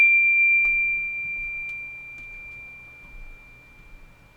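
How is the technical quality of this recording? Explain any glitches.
No glitches are audible here.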